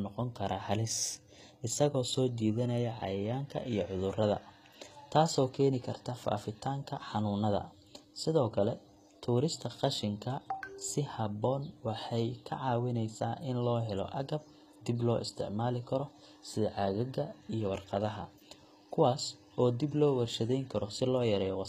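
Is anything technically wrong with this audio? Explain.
Yes, the whole recording has the sound of HE-AAC compression, likely at a low rate around 20 kbps. Above a crossover the treble is rebuilt from copied lower bands rather than coded, so s sounds come out gritty and lispy, and nothing survives above 14.9 kHz.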